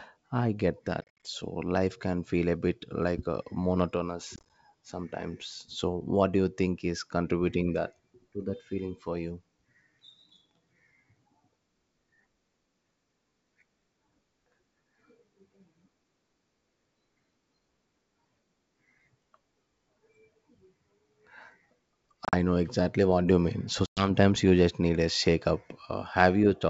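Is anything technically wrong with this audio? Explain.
Yes. Packet loss on an ADPCM call occurs at 1.01–1.28 s, 4.36–4.50 s, 22.25–22.35 s and 23.86–24.10 s. Stretches of the wideband G.722 stream drop out and are filled with silence, about 150, 70, 70 and 110 ms respectively, in runs of up to 70 ms in the first three. The decoder's adaptive predictor and step size then drift from the sender's. After each hard-edged hole, speech returns with brief, slight distortion before settling.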